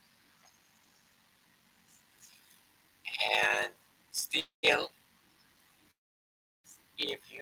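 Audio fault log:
throughout: block size mismatch (padded). A steady buzz at about 46.9 Hz runs under the speech, and everything plays at 0.861 times normal speed while the pitch stays natural. Each 1024-sample block read downstream is only partly filled, which fits blocks of roughly 880 samples, and the zeroed remainder is a tiny gap repeating at the block rate. Simple slow playback would lower the pitch. Here the pitch holds and the slowing comes with a regular buzz.
4.39–4.65 s and 5.91–6.66 s: call audio freeze, likely from packets delayed long enough to drain the jitter buffer. At 4.39 s the last sound is held for about 235 ms, around 130 ms of it silent. At 5.91 s the hold lasts about 732 ms, around 710 ms of it silent, before "if you will". In each case the speech resumes exactly where it stopped. Packet loss would drop audio, but here nothing is missing and the clip simply runs later afterwards.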